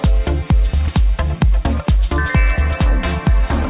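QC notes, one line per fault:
No faults found; the audio came through a WebRTC call path whose G.711 A-law coding at 64 kbps leaves nothing above 4 kHz, as expected for that codec.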